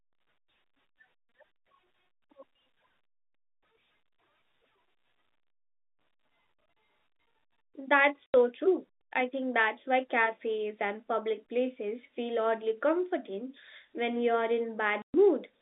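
Packet loss filled with silence cuts the speech at 8.26–8.34 s, an 80 ms hole just before "true I think that's", and at 15.02–15.14 s, 120 ms after "oddly comforting when you're". Missing packets became dead air, which fits 20 ms packets, with hard edges inside the 200 Hz–3.7 kHz telephone band.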